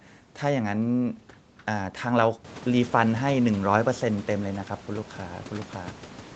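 Nothing goes wrong in this speech: it comes over a call link whose sound tops out around 8 kHz, and the room's background noise picks up a couple of seconds in while staying well beneath the talking.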